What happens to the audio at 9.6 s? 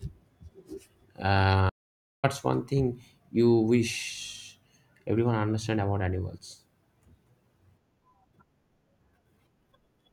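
Nothing goes wrong at 9.6 s; the speech there plays through intact, with no dropout, click or distortion.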